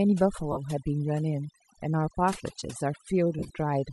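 Overdone noise removal runs throughout: the noise reducer is set too aggressively, pulling individual frequency bands down or out whenever they sit near its noise estimate. The speech loses its quieter detail, over a lowered background flecked with twinkling specks.

Lost LE Audio frames come next, from 0.52 to 0.58 s. About 45 ms of the Bluetooth stream goes missing, which fits six 7.5 ms frames. The decoder, likely LC3, fills the gap by reusing the last spectrum with randomised signs, so the speech smears into a noisy blur. A second loss, from 3.39 to 3.50 s, is scattered across about 105 ms. The missing stretches, each around 20 ms at most, add up to roughly 68 ms. The concealment leaves brief noisy, smeared patches in the speech there.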